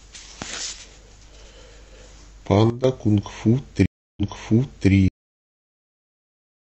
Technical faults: sudden gain jump; stream reconnect; cut-off end

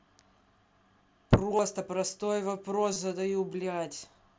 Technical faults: concealed Bluetooth headset packet loss

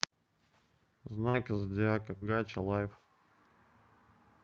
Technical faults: short concealed packet loss

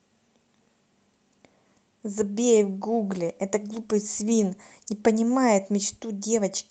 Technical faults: call bitrate drop

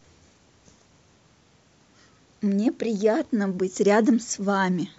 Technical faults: none

